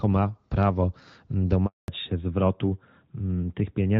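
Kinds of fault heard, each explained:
Handover gap: the call gets handed from one network to another, and nothing comes through while the switch happens. Here the sound cuts out at about 1.66 s, fading within a few tens of milliseconds, then sits in dead silence for 220 ms until about 1.88 s. Whatever was said in that window isn't muffled or garbled. It's simply gone, which is the telltale sign of a gap rather than a glitch.
Fallback to narrowband: right as the link comes back at about 1.88 s, the call drops from HD Voice down to an older narrowband codec, and it stays there to the end. Before the switch, the speech has the light, airy top of wideband coding, which fits AMR-WB at around 12.65 kbit/s. After it, nothing above 4 kHz survives, so the voice turns duller, boxier and a bit rougher, consistent with AMR-NB at around 12.2 kbit/s.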